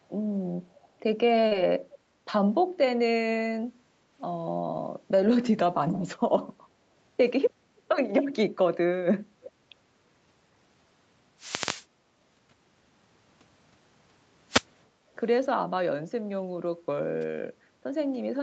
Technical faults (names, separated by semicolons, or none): echo leak; short concealed packet loss; wireless microphone noise hit; background gated by the echo canceller